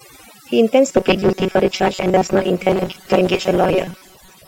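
Overdone noise removal affects the whole clip. Heavy suppression strips quiet speech detail, leaving near-silent gaps with twinkling specks. From 0.90 s to the end, the speech becomes robotic, a rigid metallic buzz near 188 Hz, likely from repeated short buffers of about 5 ms replacing roughly half the real audio.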